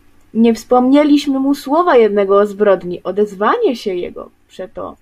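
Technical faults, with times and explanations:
No technical faults can be heard in this speech recording. There is nothing to mark with a time or to explain.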